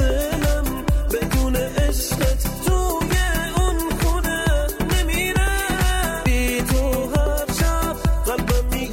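No technical faults can be heard anywhere in the audio; the signal stays steady and intact throughout.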